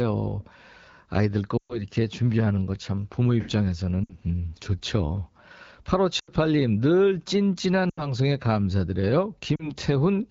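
Lost AMR speech frames hit at 1.57–1.83, 4.04–4.15, 6.19–6.32, 7.90–8.13 and 9.55–9.71 s. The wideband decoder replays the last good pitch and vocal tract settings at falling gain, so speech smears and fades rather than cutting to hard silence.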